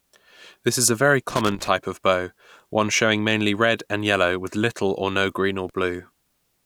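A ragged burst of crackle and scratching cuts through the speech from 1.30 to 1.68 s, and a single sharp crackle snaps past at 5.69 s. Both are loose connector crackle: a worn or dirty contact somewhere in the cable run shifts and repeatedly loses and regains connection, chopping the signal on and off irregularly.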